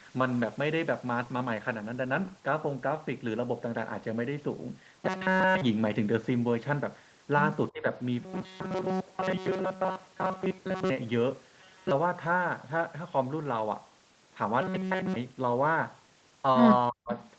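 Robotic sound from repeated short buffers turns this speech into a rigid, metallic buzz at 4.99 to 5.61 s, 8.21 to 10.90 s, 11.61 to 11.91 s and 14.62 to 15.16 s. The likely cause is audio arriving too seldom, so the playback side keeps looping the last fragment while fresh audio is dropped. The buzz sits at 188 Hz, which fits a fragment about 5.3 ms long. The first, third and fourth stretches are made almost entirely of repeats, while the long middle stretch is mostly repeats, so the speech there only loosely keeps its shape. Speech suppressed in double talk appears at 7.71 to 7.85 s, a dip of about 15 dB lasting roughly 150 ms, and more heavily at 16.90 to 17.16 s, where the level falls about 40 dB for roughly 300 ms and is close to a cutout. These dips likely come from an echo canceller that could not tell the near talker from loudspeaker echo while both sides spoke at once, and so attenuated everything. 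An echo leak follows at 17.2 to 17.28 s. It is a very faint, roughly 35 dB down copy of the speech returning 360 ms late, which likely got through because a loudspeaker's echo was not fully cancelled. Above all of this, the whole clip stops at 8 kHz, the band limit of its Opus call path.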